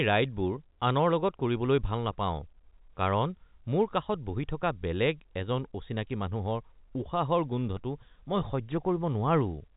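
Nothing stood out on listening to this telephone-band speech, which comes through the G.711 A-law path with its usual ceiling just under 3.8 kHz.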